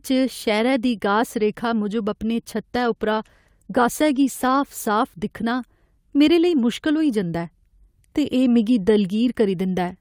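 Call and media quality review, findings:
Call bitrate drop, 2.74–4.99 s: speech turns rough and watery, holding its worst state for about 2.2 s. Encoder, likely cut from around 48 to about 18 kbps by a falling bandwidth estimate. Spectrogram shows coarser, smeared harmonic detail until recovery.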